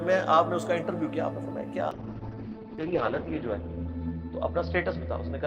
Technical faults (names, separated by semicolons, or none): call bitrate drop